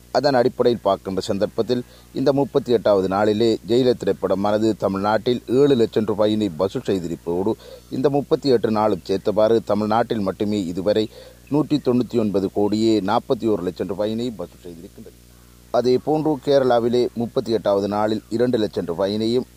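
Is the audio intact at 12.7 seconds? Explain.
No. At 12.7 seconds, as throughout the clip, a steady 60 Hz buzz with a hashy fizz above it sits roughly 30 dB below the main sound. This is video or display buzz: a screen or video cable coupling its picture field rate into the audio.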